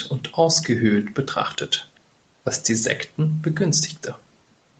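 A speech clip in which the far end's echo canceller likely let a trace of loudspeaker pickup slip back down the call. Between 1.95 and 2.00 s this echo leak surfaces as a very faint, brief copy of the voice trailing about 388 ms behind, within the call path's normal 8 kHz band limit.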